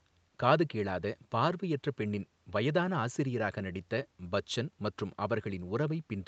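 No technical faults can be heard in this speech.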